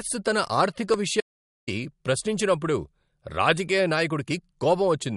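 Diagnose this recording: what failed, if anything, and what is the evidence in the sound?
MP3 compression throughout, at the codec stage: speech is band-limited with nothing above 11.2 kHz and plainly audible swirly artefacts, which fits a low bitrate near 48 kbps.

Audio dropout to silence from 1.21 to 1.68 s, right after "తన ఆర్థిక": about 0.47 s of silence with no room tone, likely a lost input link writing zeros.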